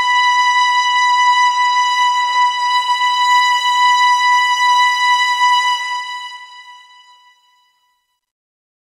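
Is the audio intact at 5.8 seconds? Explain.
No. From 5.65 to 8.92 s, the fade-out is computed at only 11 bits without dither, so this truncation distortion makes the tail gritty, worst from 7.07 s.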